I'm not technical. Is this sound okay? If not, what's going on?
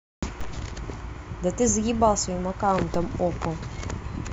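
No. There is a DC step at 0.41 s and again at 2.94 s. At each moment the signal's resting level suddenly jumps away from zero, as if the recording's baseline were bumped, and then slowly drifts back. That sudden jump is what you hear as a short, low thump, like a knock on the microphone. The speech itself carries on unaffected; only the baseline shifts underneath it.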